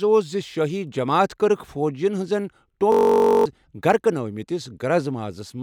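From 2.92 to 3.46 s, a system hang loop: the stalled driver leaves one 21.3 ms buffer replaying, heard as a steady 46.9 Hz buzz.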